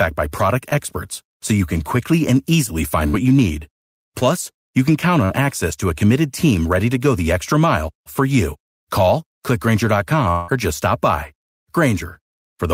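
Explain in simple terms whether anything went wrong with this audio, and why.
Several brief stretches of this speech clip were lost in transmission and patched over by the receiver.

Short concealed packet loss occurs three times: 0.69–0.74 s, 4.19–4.23 s and 5.25–5.31 s. Each time, roughly 20 to 40 ms of audio arrived too late to use. The receiver covered the hole by extending the sound just before it, then blended back into the real signal. You hear a quick smear or wobble, and a short sound can drop out.

A burst of packet loss hits at 3.08–3.15 s. About 60 ms in a row went missing, more than the receiver can disguise smoothly. It stretched the preceding sound and let it fade, so there is a brief held buzz or hiss. The speech then resumes a little further on, with that fraction of a second gone for good.

A longer gap appears at 10.31–10.50 s, most likely a long network dropout. Around 180 ms of speech never arrived. 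The receiver filled the whole stretch by continuing the last sound as a fading buzz or hiss, without falling completely silent. When the real audio returns, it picks up after the missing piece, so that part of what was said is simply absent.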